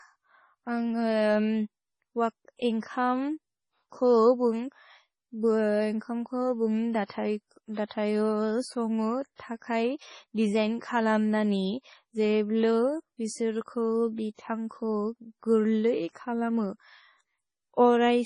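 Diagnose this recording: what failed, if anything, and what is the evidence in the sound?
The fault sits at the codec stage and runs through the whole recording. Nothing reaches above 10.5 kHz, so the speech sounds dull at the top. The sound is watery and swirly throughout. Consonant attacks smear. The likely cause is heavy MP3 compression at a very low bitrate, which fits something near 24 kbps. The encoder cuts the treble at a fixed point. Short of bits, it also drops weak frequency lines, which flicker on and off between frames.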